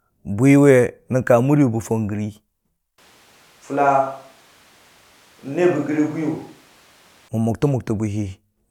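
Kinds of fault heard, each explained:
Switch to a distant microphone: speech drops about 5 dB and turns hollow, likely a farther mic; waveform shrinks, spectrogram shows thinner lows, smeared tails.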